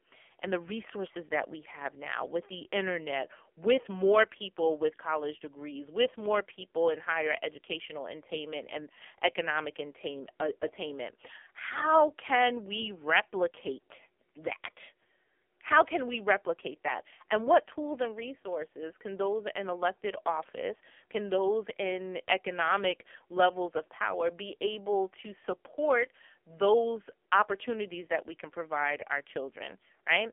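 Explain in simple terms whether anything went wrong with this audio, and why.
Something did go wrong, and it lasts the whole clip. The speech has been through the AMR narrowband mobile codec, the old 2G/3G phone speech coder. It keeps only the band from about 250 Hz to 3.4 kHz, so the voice sounds thin and boxy. It also rebuilds speech from a rough model of the vocal tract with very few bits, and the damage here is heavy, so everything comes out buzzy and noticeably synthetic.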